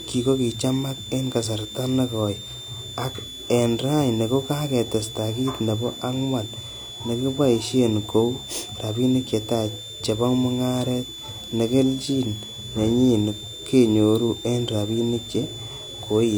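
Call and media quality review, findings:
Switching supply whistle, throughout. High whistle drifting between 3.4 and 3.6 kHz, about 15 dB below the speech. Probable component: switching power supply in burst mode or beating with a second supply. Drifting pitch separates it from fixed-frequency mains hum or acoustic feedback.

Low-bitrate audio saved at a high bitrate, throughout. MP3 file with nothing above 20.4 kHz, but with the artefacts of an earlier low-bitrate pass. This likely comes from an HE-AAC source near 48 kbit/s re-encoded as 256 kbit/s MP3. The high bitrate does not restore what the first pass removed.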